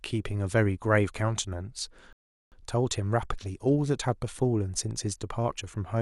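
At 2.13 s a rebuffering stall cuts the speech to flat silence for about 0.39 s until 2.52 s. Playback ran dry, then resumed exactly where it stopped, leaving a blank gap in waveform and spectrogram.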